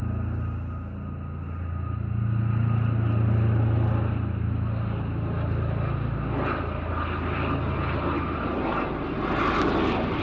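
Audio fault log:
No faults logged; the everyday sound has passed through call microphone processing, which removes the lowest bass and leaves nothing above 8 kHz, all within normal behaviour.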